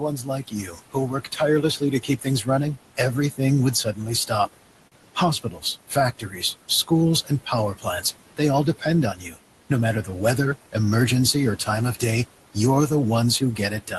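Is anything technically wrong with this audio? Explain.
Yes, there are three kinds of technical fault, all from the processing chain rather than the recording itself.

Noise suppressor artifacts run through the whole clip. The suppressor judges, frame by frame, which frequency bands hold steady noise and pulls them down by about 18 dB. The room noise, which sits about 16 dB under the speech, therefore dips away in the gaps and returns beneath the speech.

Speech cut by the noise suppressor happens in three stretches: 0.0 to 4.55 s, 5.15 to 10.09 s, and 11.34 s to the end. In each, the suppressor mistook low-level parts of the speech for noise and attenuated them along with the background. The drops go as deep as about 17, 15 and 16 dB respectively, affecting roughly 1.5 s of sound in the first stretch and about a second in the second. Soft consonants and word tails come out swallowed or faint.

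A short stall from a late packet occurs at 4.87 to 4.95 s. A packet missed its playout time, the jitter buffer ran dry, and the receiver stretched the preceding sound for 43 ms until the data arrived. It then resumed where it left off, so nothing is lost, but one sound is held unnaturally long with a slight buzz or dip. Playback runs 43 ms later from then on. The band-limited top end, stopping near 12 kHz, fits an Opus call path and is not a fault in itself.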